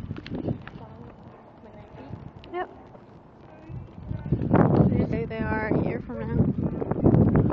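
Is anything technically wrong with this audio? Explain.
Yes. Four short glitches break into the sound, at 1.07 to 1.11 s, 2.93 to 2.96 s, 5.10 to 5.13 s and 6.98 to 7.01 s, each about 30 ms long, heard as a chirp, squawk, click or short hole. This is damaged data in a compressed stream: corrupted bytes make the decoder misread frames, lose sync and jump to the next frame header.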